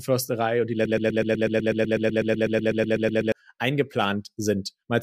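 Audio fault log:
0.85–3.32 s, broken-record loop: a 0.12 s speech fragment repeats identically, back to back, 20 times, likely from a stalled player or stream resending its last buffer. Unlike echo, the copies never decay or overlap, and the speech due there is lost.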